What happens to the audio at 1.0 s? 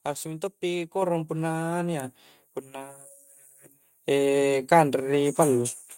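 Right after "harus minto pi", at about 1.02 s, there's a microphone volume stepped up event: the call software decided the mic was too quiet and bumped the input gain in one go, so the voice and the room behind it both jump by about 5 dB together.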